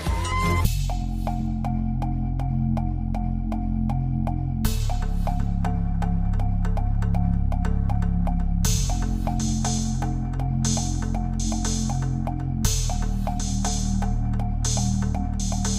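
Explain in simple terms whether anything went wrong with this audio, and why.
Nothing went wrong that I could hear; listening closely, no problems stood out anywhere in the recording.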